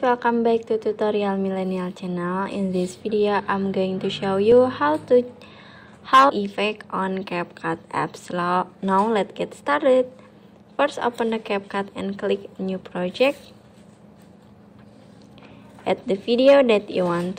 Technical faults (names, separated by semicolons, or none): stream segment skipped